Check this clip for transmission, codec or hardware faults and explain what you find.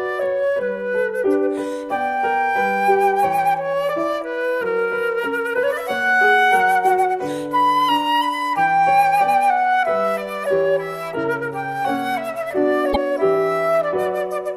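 One transmission fault is present: repeated frames, from 12.92 s to 12.96 s. A block of compressed audio was delivered or written twice, so the decoder played the same 26.1 ms again right after its first pass. The length fits a single frame being duplicated, and the clip runs 26.1 ms longer than it otherwise would. It is heard as a brief stutter, a short slice of the sound restarting once before the audio carries on.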